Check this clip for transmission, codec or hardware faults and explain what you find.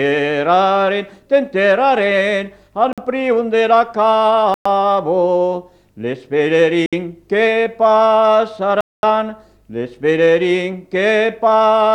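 Four dropouts to silence point to one fault, a Bluetooth stall, at 2.93 to 2.98 s (48 ms), 4.54 to 4.66 s (114 ms), 6.86 to 6.93 s (66 ms) and 8.81 to 9.03 s (224 ms). Radio interference likely delayed packets on the wireless link, so the receiving buffer emptied and playback halted until retransmitted data arrived. Each time the sound cuts abruptly to silence, then resumes. The final gap, nearly a quarter second, is the longest.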